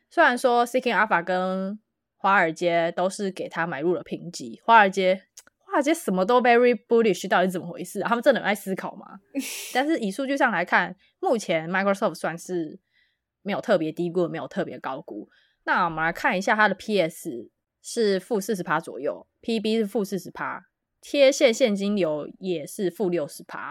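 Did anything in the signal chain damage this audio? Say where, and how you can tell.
No, nothing in this speech recording points to damage at any stage of the chain, so there's nothing to trace back to a particular point.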